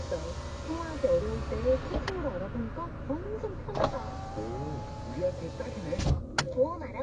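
Throughout, the audio is dull and smeared, with a warbling, fizzy texture. Nothing is heard above 9.7 kHz. The likely cause is AAC compression at a low bitrate, fitting roughly 32 kbps, which lowers the cut-off and leaves holes in the spectrum.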